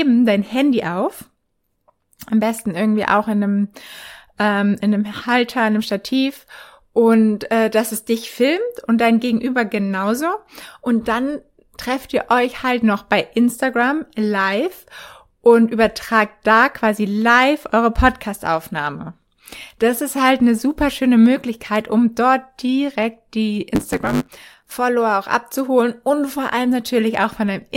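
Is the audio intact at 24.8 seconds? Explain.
No, not quite. A block size mismatch (truncated) runs from 23.74 to 24.75 s, ending right there. The tail of each block is discarded, which fits a 512-sample block feeding a smaller read. This causes a 100 Hz buzz and speech running 1.16 times fast at normal pitch, unlike a resampling speed-up, which would also raise the pitch.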